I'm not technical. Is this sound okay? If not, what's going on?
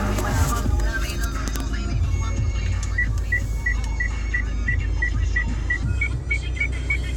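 No. A section at the wrong speed runs from 5.83 s to the end at 7.16 s. It plays about 1.15 times too fast, so it sounds hurried and roughly two semitones higher. This likely happened because that stretch was played back against the wrong clock.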